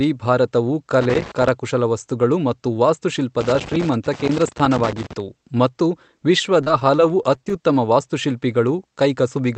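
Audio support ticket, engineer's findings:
Loose connector crackle, 1.0–1.5 s (just before "ವಸ್ತುಗಳು ಮತ್ತು") and 3.4–5.2 s: intermittent contact making and breaking, chopping the signal into irregular scratchy bursts.

Repeated packet loss, 6.46–7.53 s: packets repeatedly dropped or late, each hole (longest about 24 ms) patched by extending prior audio. The result is choppy, robotic sound, with roughly an eighth of the span concealed.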